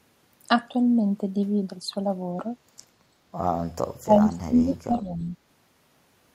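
From 4.01 to 5.36 s the speech sinks in level in stretches that add up to roughly a second, falling as far as about 25 dB below its surrounding level at the deepest point before recovering. This is speech suppressed in double talk, most likely caused by the far side talking at the same moment: the echo canceller could not tell this talker apart from the loudspeaker's echo and turned both down together.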